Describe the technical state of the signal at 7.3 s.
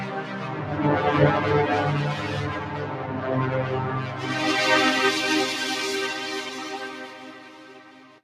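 Held sound and tails dip and swell by around 5 dB, pumping and thinning. This is a noise suppressor applied to music or sounds, active throughout the clip.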